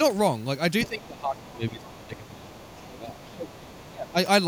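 An echo canceller that likely failed to fully remove the far end's loudspeaker signal lets the other side's voice leak through. From 0.84 to 1.07 s a second voice sits only about 15 dB below the speech. From 0.88 to 3.73 s the canceller appears unable to tell its own talker from that echo during double talk, so speech is suppressed. The main voice sinks by as much as about 20 dB over roughly three seconds, dipping and thinning in uneven stretches. Within that span the leaking voice returns, fainter at about 25 dB down, from 1.79 to 2.98 s and again from 3.19 to 3.29 s, under the weakened speech. It leaks through once more from 3.74 to 3.90 s. Then from 3.90 to 4.16 s the speech is suppressed again, dropping by up to about 20 dB for a brief fraction of a second.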